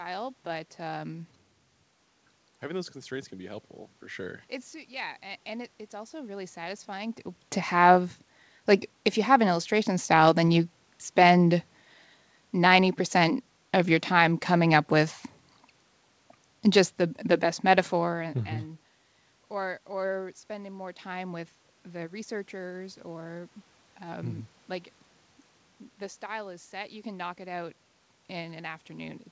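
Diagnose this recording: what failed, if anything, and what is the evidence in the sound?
Nothing failed: the room noise is part of the recording, the level changes around 7 s and 18 s are the talker moving relative to the microphone, and the absence of content above 8 kHz is the expected band limit of the call codec on this path.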